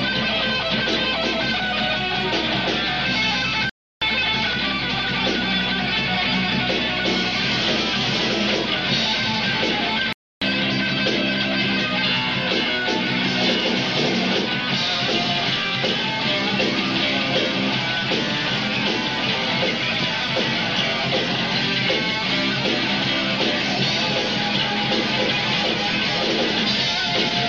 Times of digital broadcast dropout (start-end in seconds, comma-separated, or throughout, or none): 3.69-4.02, 10.13-10.42